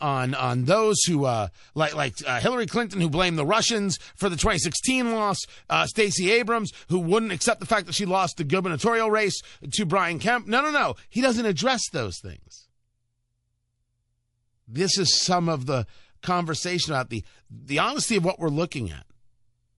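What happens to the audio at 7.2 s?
The speech at 7.2 s sounds watery and swirly throughout, likely from MP3 compression near 48 kbps. Starved of bits, it truncates treble, showing a flat spectrogram ceiling with flickering holes.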